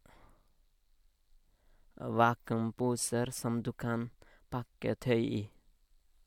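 No technical faults are audible.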